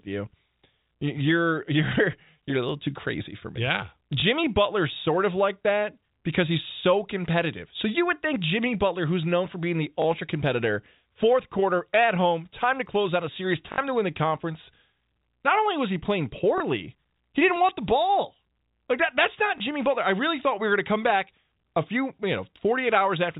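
Packets were dropped on the way and the receiver filled each gap by replaying the last packet it had, a packet loss with last packet repeated. This happens at 4.20–4.22 s, at 10.02–10.04 s after "known for being the", at 13.72–13.78 s after "close out a series", at 16.58–16.60 s, and at 19.58–19.60 s after "that that's not". The 20 ms gaps fit single lost packets and each gives a small blip. The 60 ms gap fits three packets and gives a short robotic stutter with a 50 Hz buzz, heard through the band-limited telephone sound of G.711.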